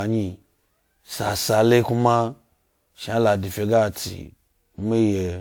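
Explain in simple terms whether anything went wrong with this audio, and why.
From start to finish, the speech sounds swirly, hollow and smeared, and the beginnings of sounds are blurred. That is generation loss, likely from the audio being compressed and decompressed roughly seven times over, with each round adding its own fresh damage.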